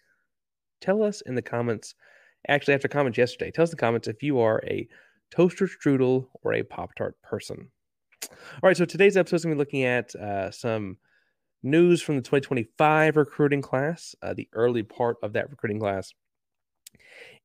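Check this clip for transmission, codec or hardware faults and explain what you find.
Nothing wrong can be heard anywhere in the recording.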